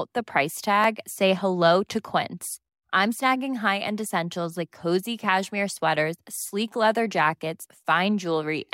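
At 0.84 s there is a block of digital silence in the speech. It lasts only about 0.73 ms, which fits a block of 32 samples. For that instant the signal drops straight to silence and then returns, with no fade on either side. Both edges are hard steps in the waveform. Because the hole is so short, the two edges merge into one. The ear hears a single sharp tick rather than a gap.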